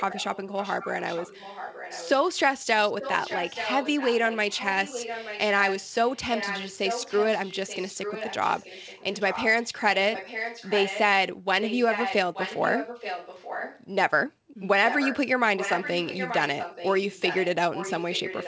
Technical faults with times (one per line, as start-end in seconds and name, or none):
0.00-2.10 echo leak
2.89-9.76 echo leak
10.13-11.01 echo leak
11.61-13.84 echo leak
14.88-15.18 echo leak
15.57-18.48 echo leak